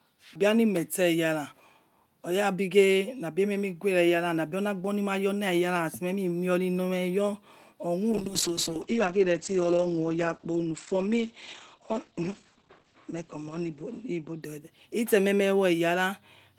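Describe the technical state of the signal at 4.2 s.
At 4.2 s the speech signal is intact, with no audible technical fault at that moment.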